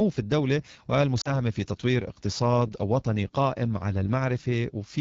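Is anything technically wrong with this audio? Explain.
Yes, there are two faults. Throughout, the speech carries AMR wideband (HD Voice) codec damage that is plainly audible: a rough, raspy texture with hissy noise above 6.4 kHz. This fits a low AMR-WB rate near 8.85 kbit/s, where the pulse excitation and vocal tract model are too coarse.

From 1.21 to 1.40 s there are lost AMR speech frames, about 40 ms of missing audio, consistent with two dropped frames. The decoder repeats the last good pitch and vocal tract settings at falling gain, so the sound drops to near silence within two frames, then returns briefly weak or rough.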